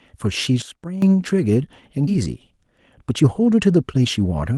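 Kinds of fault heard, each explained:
Sudden gain jump: from 0.62 to 1.02 s the speech and background noise drop together by about 12 dB and then return, likely a gain setting applied without a ramp.
Skip ahead: at 2.07 to 2.09 s playback jumps forward with no gap, so roughly 0.7 s of speech is missing and both sides are joined almost directly.
Jitter buffer speed-up: from 3.1 to 4.52 s the speech runs at 112% speed with unchanged pitch, as short pitch-period pieces totalling around 0.2 s are cut out, sounding hurried.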